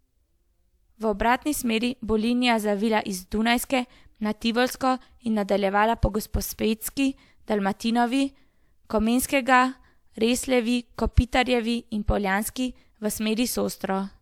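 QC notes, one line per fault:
No faults found in this speech recording.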